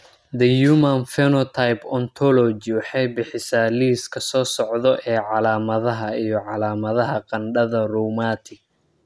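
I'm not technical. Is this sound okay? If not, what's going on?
Yes, this speech recording sounds fine. Nothing in it stands out as a technical problem, so there's nothing here that needs explaining or fixing.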